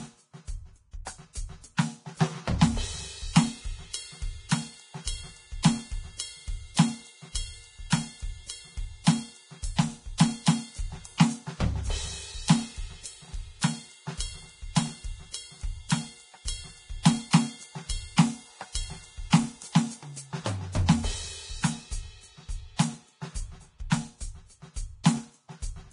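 Throughout the music, the treble sounds hissy and grainy, tones have a roughened edge, and attacks are blurred. Nothing is heard above about 10.6 kHz. This is likely heavy Vorbis compression at a low setting, with damage that fits a bitrate of around 30 kbps. The codec drops the top of the spectrum and quantises what remains so coarsely that fine high-frequency detail turns into noise of similar energy.

At 10.18 s, a brief hiss comes just before a sharp attack, and the attack itself sounds softened and smeared. This is pre-echo, spread over about 18 ms. The codec works in transform blocks and spreads its quantisation noise evenly across each one. Because this attack lands late in its block, noise sized for the loud onset also fills the quiet moment before it, where it is exposed.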